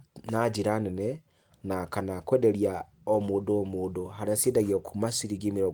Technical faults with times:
none

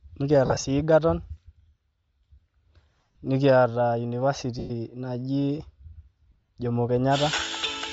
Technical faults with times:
0.00-7.93 Bluetooth LC3 compression
0.46-0.64 lost LE Audio frames
2.99-3.17 lost LE Audio frames
4.59-4.71 lost LE Audio frames
6.31-6.49 lost LE Audio frames

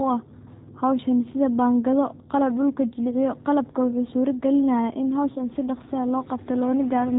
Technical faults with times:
0.00-7.19 G.729 codec
5.32-5.43 VoIP packet loss concealed by the speech codec

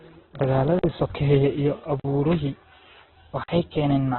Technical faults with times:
0.00-4.18 Opus compression
0.79-0.84 block of digital silence
2.00-2.04 block of digital silence
3.44-3.48 block of digital silence

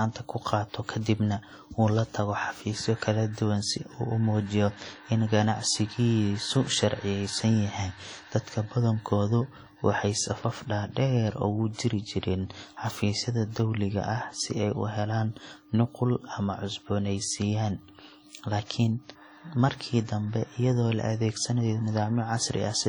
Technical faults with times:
0.00-22.89 WMA compression
11.73-11.79 pre-echo

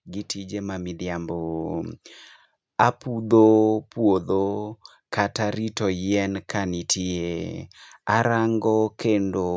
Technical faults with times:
0.49-1.62 automatic gain rising

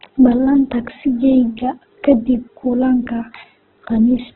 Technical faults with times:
0.00-4.36 Opus compression

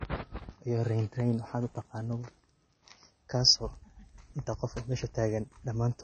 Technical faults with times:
0.00-6.03 low-bitrate audio saved at a high bitrate

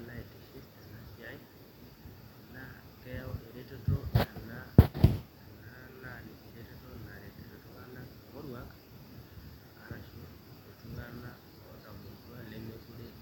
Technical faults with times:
none

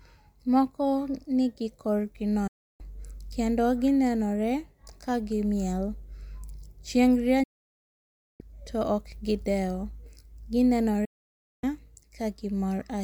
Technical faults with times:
2.47-2.81 digital broadcast dropout
7.43-8.41 digital broadcast dropout
11.05-11.64 digital broadcast dropout

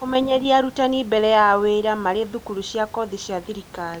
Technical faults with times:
none

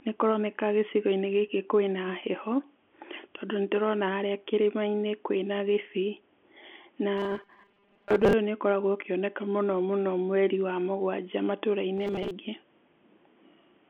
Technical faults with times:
7.18-8.33 robotic sound from repeated short buffers
11.98-12.31 robotic sound from repeated short buffers

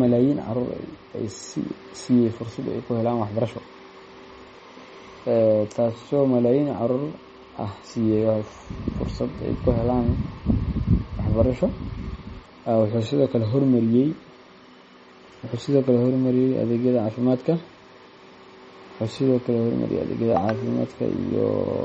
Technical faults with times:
0.00-21.84 MP3 compression

